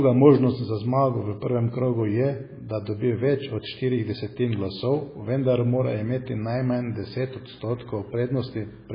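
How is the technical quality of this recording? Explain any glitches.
Poor, with one fault running throughout. From start to finish the speech sounds watery and swirly with smeared consonants, most likely heavy MP3 compression starved of bits, which fits roughly 16 kbps. Nothing survives above 5 kHz, and a spectrogram shows a hard ceiling there with speckled, flickering gaps below.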